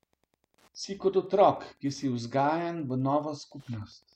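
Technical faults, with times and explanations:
Throughout, Wi-Fi interference: faint ticks repeat every 102.4 ms, around forty decibels below the speech, as a nearby radio's beacons are rectified, giving discrete clicks rather than continuous hum.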